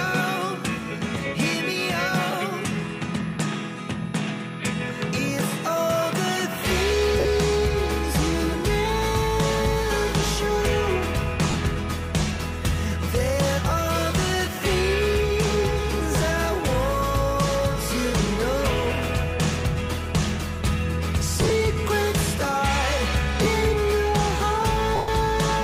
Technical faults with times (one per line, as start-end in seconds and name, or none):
7.20-7.25 lost LE Audio frames
11.51-11.54 lost LE Audio frames
21.42-21.50 lost LE Audio frames
23.43-23.46 lost LE Audio frames
24.96-25.08 lost LE Audio frames